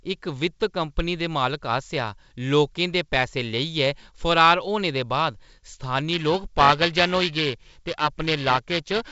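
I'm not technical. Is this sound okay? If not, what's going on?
No. From about 6.13 s to the end, the speech takes on a rough, metallic buzz riding on top of it, sharpest on hissy sounds like s and f, and gone in the pauses. This is periodic clock jitter: something is shaking the timing clock that turns sound into digital samples, around 700 times a second, so every sound gets false copies just above and below it in pitch. The telephone-style G.722 wideband coding is also audible as a slight top-end limit.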